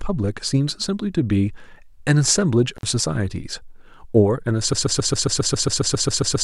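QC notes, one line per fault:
2.76–2.83 s, intermittent contact: the speech drops out for about 60 ms, with a short crackle as the signal breaks and again as it returns. During the gap faint hiss remains. This is what a loose plug or cable does when the conductor briefly lifts off its contact. The circuit opens and the programme disappears, and the scraping of the contact surfaces produces the clicks at either edge.
4.73 s to end, broken-record loop: a fragment of about 136 ms repeats exactly, back to back, 13 times until the clip finishes, so the speech turns into a rapid stutter with no forward progress. The likely cause is a stalled player, encoder or stream that kept resending the last block it held. The speech that should have filled those final seconds is lost and is not recoverable from this file.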